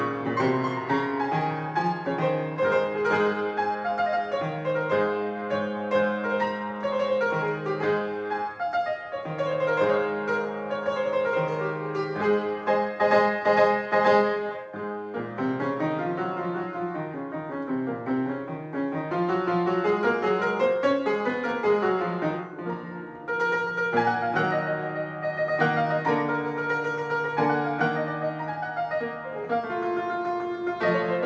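No faults found; the audio stays band-limited with nothing above 8 kHz, consistent with a wideband call path such as G.722 at 64 kbps.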